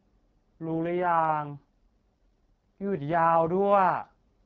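From 0.64 s to 3.59 s there is an AMR rate drop. The speech turns rough, raspy and synthetic. The bandwidth stays the same, and there is no gap. This fits the AMR-WB codec stepping down from 12.65 to 6.6 kbit/s, probably due to a weak radio link.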